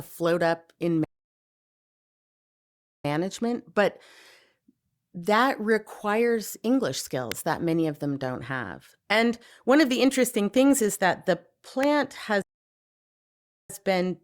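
Playback stall at 1.04 to 3.05 s: the speech drops to silence for 2 s mid-flow, then resumes, likely because the player ran out of data or its thread was blocked.

Electrical switching spike at 7.32 s: a sharp snap sits on top of the speech, likely a brief arc from a nearby switch or motor coupling into the audio line.

Electrical switching spike at 11.83 s: another short snap, likely from the same kind of nearby switching.

Playback stall at 12.42 to 13.70 s: the speech cuts out for 1.27 s before carrying on, likely from the player again starving or being blocked.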